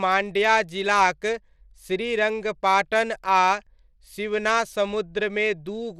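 Throughout the speech, likely Bluetooth SBC compression, at a rate that fits about 96 kbps, starves the top bands. Nothing remains above 14.6 kHz, and plainly audible gritty grain rides on the sound.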